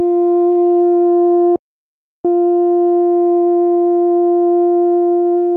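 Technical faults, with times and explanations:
1.56–2.25 s, playback stall: the music drops to silence for about 0.69 s, then picks up again. The player likely ran out of buffered data or had its output thread blocked, so nothing reached the output until it recovered.
3.51–5.52 s, repeated stalls (stutter): data kept arriving late, emptying the jitter buffer 28 times. Each gap, none longer than 23 ms, was filled by stretching the preceding sound, 336 ms in all, about 17% of the span. Nothing is lost, but the music drags and stutters.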